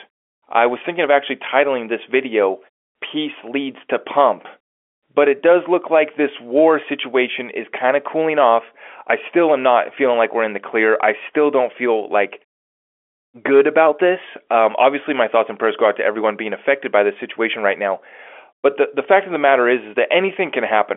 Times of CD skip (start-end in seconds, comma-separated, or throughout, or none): none